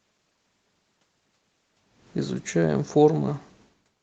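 From 2.57 s to the end, automatic gain falling pulls the speech down: the gain control judged the input too loud or its background noise too strong and eased its gain back. Unlike the talker moving near 3.5 s, the room noise sinks along with the voice.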